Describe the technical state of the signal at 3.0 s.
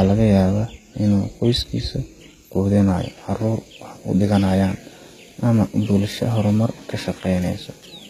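At 3.0 s, as throughout, the speech has likely passed through HE-AAC compression at a low bitrate around 20 kbps. The codec rebuilds the treble from copied lower bands instead of coding it, so sibilants turn gritty and metallic, and nothing reaches above 14.9 kHz.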